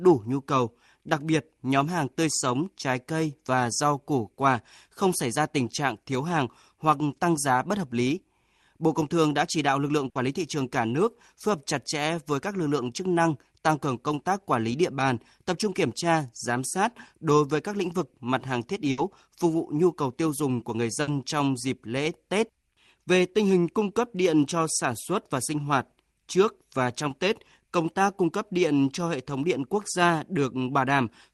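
A burst of packet loss hits this speech at 10.09 s, 18.91 s and 21.01 s, each lasting about 90 ms. Several consecutive packets never arrived in time, so the receiver stretched the last good audio for about 60 ms, fading it as a held buzz or hiss, then jumped ahead, leaving about 60 ms of speech missing. The audio resumes abruptly, with a small skip in the flow each time.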